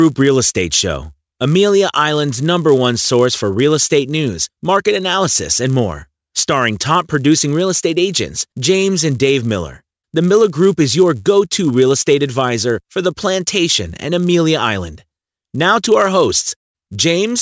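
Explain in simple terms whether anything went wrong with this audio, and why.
Something went wrong: the resampler was restarted on every block. The converter that changes the sample rate handled the audio in 10 ms pieces, each on its own, so it guessed wrongly at every piece's edges. Each edge leaves a tiny error, and with 100 edges per second these merge into a steady buzz at about 100 Hz. It runs through the whole speech clip whenever sound is present, and drops away in the pauses.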